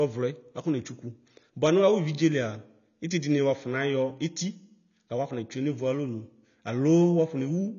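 From start to finish the speech sounds dull and smeared, with a watery, warbling texture that is plainly audible, and nothing at all reaches above 7 kHz. This is likely AAC compression, with AAC-LC working at a low bitrate that fits roughly 24 kbps. With so few bits per frame, the encoder discards the top of the spectrum and quantises the remaining frequency lines coarsely, which blurs detail and leaves that unsteady shimmer on the voice.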